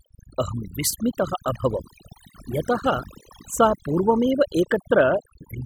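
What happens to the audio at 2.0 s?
At 2.0 s, as throughout the speech, overdone noise removal mutes bands near the noise estimate, leaving twinkling specks in near-silent gaps, unlike codec smearing.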